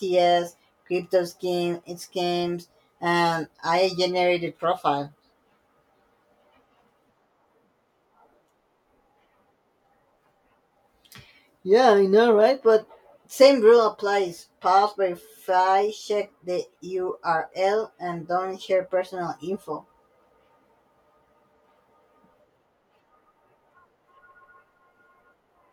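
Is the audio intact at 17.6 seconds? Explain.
Yes, the speech at 17.6 seconds plays through intact, with no dropout, click, distortion or other fault.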